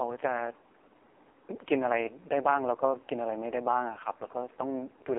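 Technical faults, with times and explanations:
throughout, AMR narrowband mobile codec: the speech sounds buzzy, thin and synthetic, confined to a 300 Hz to 3.4 kHz phone band with nothing above. The codec rebuilds the voice from a vocal-tract model driven by sparse pulses, and damage this heavy points to its 5.15 kbps mode.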